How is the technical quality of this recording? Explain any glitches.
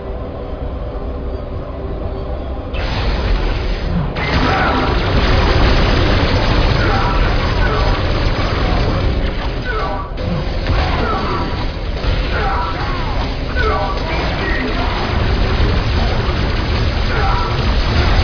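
The technical quality of this recording is sound, with no glitches to explain.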